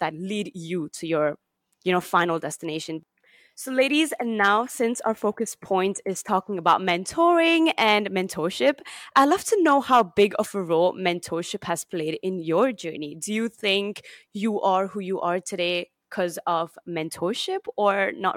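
Nothing goes wrong anywhere in this speech recording, so there isn't a single technical fault to point to.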